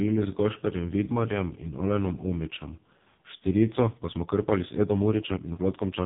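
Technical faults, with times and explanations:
throughout, AMR narrowband mobile codec: The speech sounds buzzy, thin and synthetic, with nothing above 3.8 kHz. Heavy coding damage like this fits the lowest AMR-NB mode, around 4.75 kbps, where a few pulses driving a vocal-tract model must stand in for the real voice.
3.63 to 6.06 s, time-stretched section: The pace jumps abruptly to about 1.35 times faster while the pitch stays put, and the speech turns rushed. This likely comes from software shortening the audio by dropping short pieces to keep the pitch unchanged.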